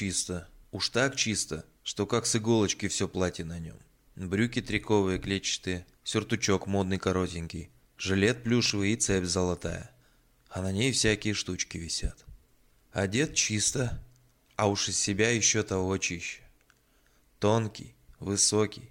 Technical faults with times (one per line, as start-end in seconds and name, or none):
8.66-8.70 chunks out of order